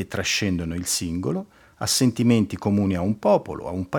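No technical faults occur at any point in the clip, so there is nothing to place in time order.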